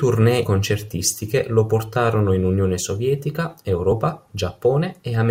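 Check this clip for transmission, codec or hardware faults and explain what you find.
The speech has two instances of compressed frames skipped. From 0.43 to 0.48 s, and again at 3.91 s, the audio jumps forward by around 70 ms each time, which points to a few whole 20 ms frames being lost in transmission or rejected by the decoder as corrupt. At each join the speech resumes slightly ahead of where it stopped.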